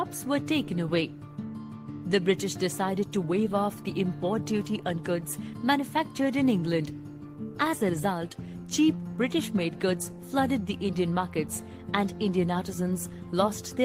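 No technical faults are audible.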